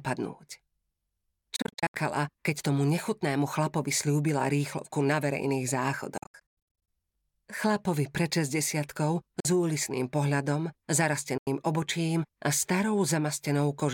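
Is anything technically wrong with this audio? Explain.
Yes. The sound cuts out in bursts, most likely Bluetooth dropouts: 1.56 to 1.95 s (about 250 ms lost, scattered, longest gap 73 ms), 6.18 to 6.88 s (about 390 ms lost, longest gap 102 ms), 9.40 to 9.45 s, and 11.38 to 11.47 s. Audio packets reach the headphones too late and are discarded, so playback falls silent and then resumes further on, as if the sound had kept playing. The waveform shows flat, abrupt-edged holes, and the spectrogram shows blank vertical bands across all frequencies.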